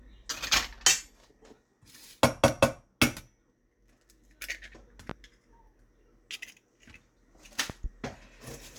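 A sharp loud pop cuts through at 5.10 to 5.13 s, then a quick double pop follows from 7.70 to 7.88 s. Each one peaks at roughly 10 dB above the surrounding audio, and the sound carries on unbroken beneath them. The likely cause is a sudden voltage step or pulse entering the signal chain, such as from a plug, a switch, static discharge or a driver glitch. The later circuitry shapes that pulse into the audible thump.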